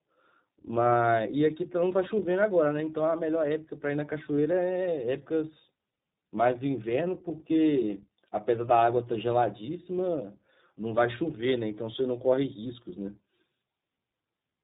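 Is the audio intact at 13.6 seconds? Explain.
No. At 13.6 s, as throughout, the speech sounds rough, muffled and warbly with nothing above 3.8 kHz: tandem speech coding, with AMR-NB and then iLBC, iLBC re-coding the already degraded output of AMR-NB.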